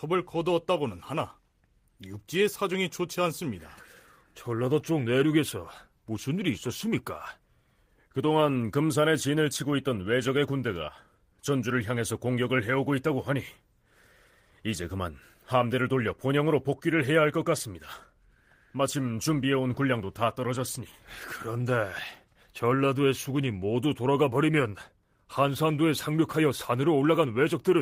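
Speech recording with no audible technical faults.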